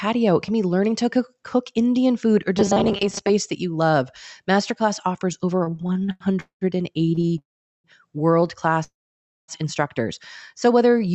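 From 2.57 to 3.30 s the sound turns into a rigid, metallic buzz fixed at 200 Hz. It still loosely tracks the speech, but about half of it is a repeat rather than new material. This is robotic sound from repeated short buffers. Audio was likely arriving too seldom, so the receiver kept replaying the last slice, about 5 ms long, which fits that 200 Hz buzz, while the real audio was skipped.

From 5.59 to 6.23 s the speech catches and drags through about ten small hitches. The longest lasts 91 ms, and together they fill 248 ms, about 39% of that stretch. A second burst of this stutter runs from 7.09 to 7.37 s, with five hitches filling 90 ms, the longest 23 ms. These are repeated stalls. Packets ran late, the jitter buffer kept emptying, and each time the receiver stretched the last sound until fresh audio came. Nothing is lost, but the timing is broken up.

The call audio freezes three times. 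At 6.40 to 6.64 s there is a 210 ms hold, of which 120 ms is silent. At 7.38 to 7.87 s the hold lasts 457 ms, 410 ms of it silent. At 8.84 to 9.51 s it lasts 641 ms, 570 ms of it silent. Each freeze is a brief trailing continuation of the last sound fading into silence, and then the speech picks up exactly where it stopped. Packets were likely held up in transit, so the buffer ran dry and a gap was inserted. No speech is missing.

From 10.90 to 11.13 s the audio runs slower at an unchanged pitch, about 88% speed, with 37 ms added and a drawn-out quality. This is a jitter buffer slow-down. The receiver repeated single pitch periods to rebuild its reserve. Throughout the clip the Opus call path limits the audio to 8 kHz.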